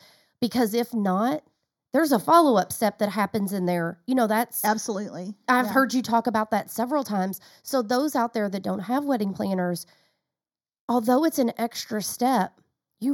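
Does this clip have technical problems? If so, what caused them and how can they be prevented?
Yes. Throughout the speech there is channel delay causing comb filtering: one channel arrives roughly a fifth of a millisecond late, and summing to mono cancels shared content at evenly spaced frequencies, with the first notch around 3 kHz. The result is a hollow, phasey tone. Unlike flanging, the notches never sweep, and unlike plain low-pass filtering, energy returns between notches rather than falling away. To prevent it, time-align both channels before any mono fold-down.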